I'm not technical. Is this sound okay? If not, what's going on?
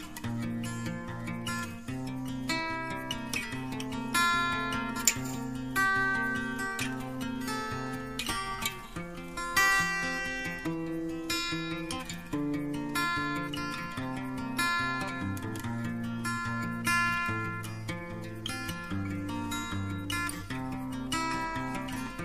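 Yes, nothing in this recording stood out as a problem when I listened to it.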